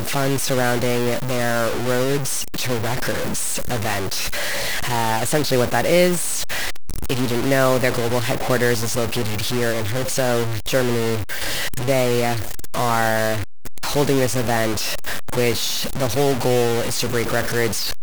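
Speech heard through a coarse, grainy distortion for the whole clip, the signature of low bit depth without dither. The distortion follows the voice, quiet passages sputter or drop out, and a waveform shows stair-stepped levels, likely from truncation to about 4 bits, with error only about 5 dB below the signal, smeared broadband across a spectrogram.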